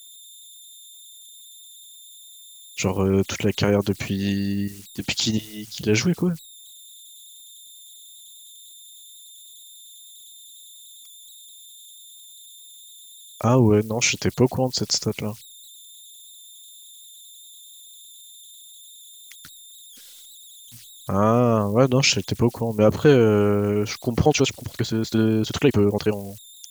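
A speech recording carries converter idle tones throughout: a whistle around 4 kHz sits about 26 dB below the signal, clearest in pauses and grainy under quiet passages. Unlike mains hum, it is high and thin, the sign of an undithered delta-sigma converter cycling through repeating bit patterns. From 24.19 s to 26.71 s the pace jumps to 1.69 times normal speed and sounds rushed, yet the pitch stays put, which rules out a simple playback-speed change. The cause is likely a time-stretched section squeezed to fit, with short pieces dropped.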